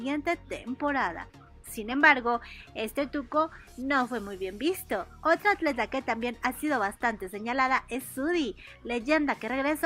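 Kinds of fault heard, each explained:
No technical fault can be heard anywhere in the audio.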